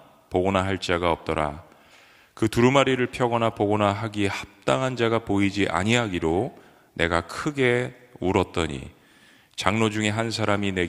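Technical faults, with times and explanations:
No technical faults can be heard in the speech, and the signal keeps a steady, intact path with no breaks, level jumps or added disturbances at any point.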